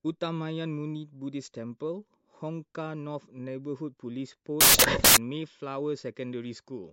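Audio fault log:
4.61–5.17 s, samples built from the wrong bytes: for just over half a second the reader assembles each sample from misaligned or swapped bytes, so the rapidly changing low-order bits land in the most significant positions and dominate every value. The speech is replaced by loud, harsh broadband noise, then clean speech resumes at 5.17 s.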